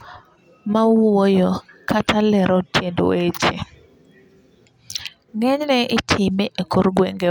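Nothing technical stands out in this speech recording; there's no fault to point to anywhere in it.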